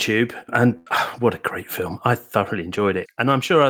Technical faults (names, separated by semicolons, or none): burst of packet loss